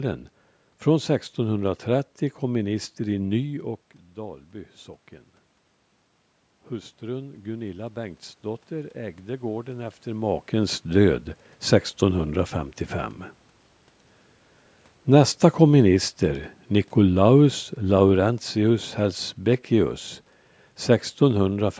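Automatic gain rising runs from 6.68 to 10.34 s. The input level fell by about 15 dB, so the gain control slowly added about 6 dB to compensate. Over those few seconds the speech and the room noise behind it swell together rather than jumping.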